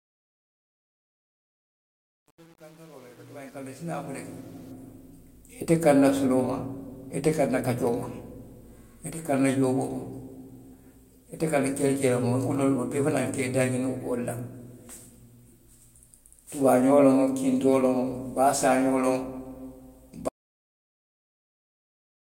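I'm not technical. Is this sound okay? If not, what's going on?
No. There are two problems, one at each end.

The opening is a fade-in, rising smoothly from silence to normal level by about 4.72 s, but it suffers from truncation distortion on a fade. The volume change was calculated too coarsely, which fits an 8-bit stage, so the quietest part is rebuilt from a few rough steps instead of a smooth curve. From the start to about 4.5 s the sound is gritty and crackly rather than growing cleanly.

The second problem is an audio dropout to silence. At 20.29 s the sound stops abruptly and stays completely silent through to the end. There is no faint background hiss, just silence, which means the recording kept running while no sound was reaching it. The likely cause is a lost input, such as a disconnected device, a failed link or an accidental mute. Anything said in those last two seconds is gone.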